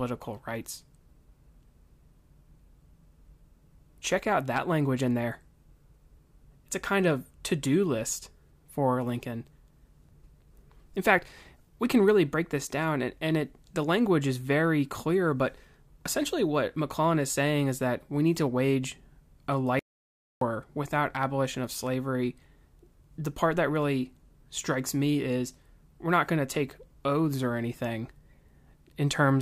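At 19.79 s the speech cuts off abruptly into silence, with no room tone underneath, and resumes at 20.41 s. This is an audio dropout to silence lasting about 0.62 s. The likely cause is a momentary loss of the input signal, such as a link failure or brief mute, while the recorder kept writing silence. Whatever was spoken during that gap is unrecoverable.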